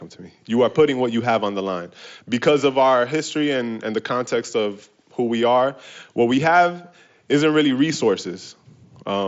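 Nothing stood out on listening to this speech, which arrives over a Bluetooth mSBC headset link that carries nothing above 7.7 kHz.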